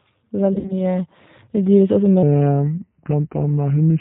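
G.729 codec damage runs through the whole speech clip: the 8 kbit/s coder rebuilds the voice from a vocal tract filter, a pitch predictor and a few pulses per frame, so everything above 4 kHz is gone and the speech has a plainly rough, synthetic edge.

VoIP packet loss concealed by the speech codec appears from 0.53 to 0.96 s. About 100 ms of audio went missing, scattered over 160 ms with a longest gap of 60 ms, which fits several lost 20 ms packets. The decoder filled each gap by extending its last pitch and filter at falling gain, so the speech turns briefly buzzy and weak and stays thin after packets return.

A section at the wrong speed starts at 2.23 s and lasts to the end. It plays at 0.80 times normal speed, so the speech drags and drops roughly four semitones together, deep and slow. This likely comes from that stretch being played against the wrong clock.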